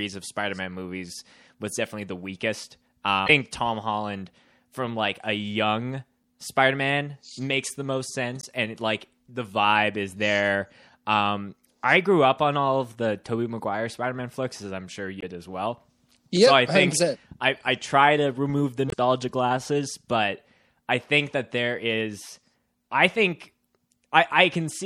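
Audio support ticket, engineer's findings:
Lossy encoder starving the upper band, likely MP3 compression. Treble cut at a fixed ceiling, weak spectral lines toggling frame to frame. Heard across the whole speech track: watery, swirly texture, metallic chirping on s sounds, smeared consonant onsets. Damage plainly audible, which fits a low bitrate around 64 kbps.

Damaged data in a compressed stream: corrupted frames at 3.26–3.30 s, 6.21–6.26 s, 8.40–8.45 s, 15.19–15.25 s and 18.88–18.94 s, each roughly 45–60 ms. Decoder misreads the bad bytes, drops sync, rescans for the next frame header. Each instance is a short chirp, squawk, click or hole.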